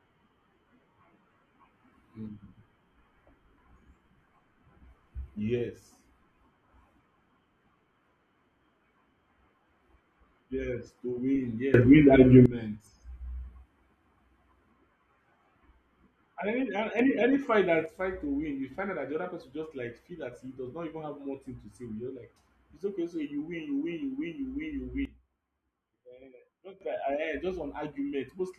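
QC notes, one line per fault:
11.74–12.46 s, sudden gain jump: a likely unramped digital gain change lifts the speech and the background noise together by about 18 dB, then drops them back just as abruptly.
16.99–17.86 s, sudden gain jump: the same step, about 6 dB up, ends just before "fight to win you".
25.05–26.81 s, sudden gain jump: here the level falls by about 15 dB, so the speech and noise floor sink together for nearly two seconds.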